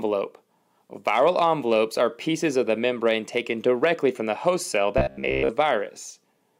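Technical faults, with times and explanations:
4.98 to 5.49 s, robotic sound from repeated short buffers: the sound turns into a rigid, metallic buzz at 66.8 Hz for about half a second. The likely cause is fresh audio arriving too slowly, so playback keeps looping a fragment of roughly 15 ms, one period of that buzz, while the real audio in between is skipped. Most of this stretch is repeated material.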